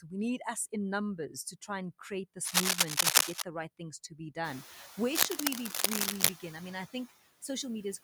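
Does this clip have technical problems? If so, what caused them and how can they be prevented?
Yes. Noise suppressor artifacts run throughout: the suppressor cuts steady noise by about 14 dB, so the residue pumps with the speech rather than staying constant. Prevention: use gentler suppression or reduce noise at the source.

Cable scratch noise appears from 2.41 to 3.42 s, well above the speech, and from 5.14 to 6.29 s, somewhat above it. These are dense, irregular rustling bursts rather than suppressor flutter, likely from a worn cable or connector. Prevention: replace or secure the cable and connectors.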